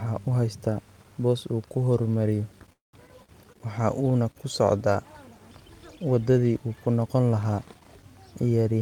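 Right after "boos uu ku horumariyo", from 2.72 to 2.95 s, the speech smears into a fading buzz, falls silent for 140 ms, then returns with 200 ms lost. This is likely a long network dropout, with the receiver stretching the last sound before giving up.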